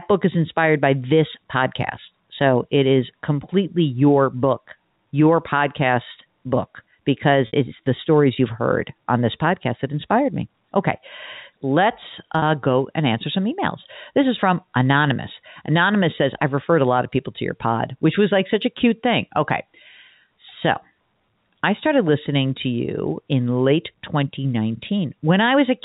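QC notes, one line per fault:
7.47–7.53 s, packet loss with pitch repetition: about 60 ms went missing after "your podcast book because". The receiver looped the last pitch period to fill it, so there's a brief held, buzzy tone before "it's the stories".
12.39–12.42 s, packet loss with pitch repetition: a shorter 30 ms gap right before "go and answer some", patched the same way, so it comes across as a quick buzzy hitch.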